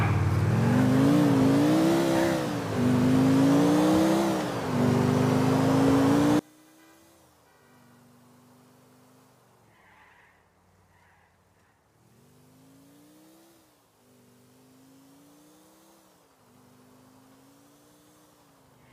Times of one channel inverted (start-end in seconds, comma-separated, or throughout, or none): 6.39-18.92